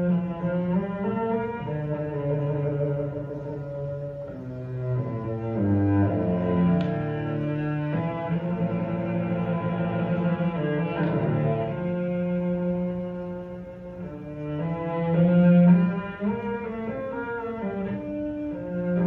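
No technical faults can be heard anywhere in this audio. Nothing in it breaks, jumps or drops out at any point.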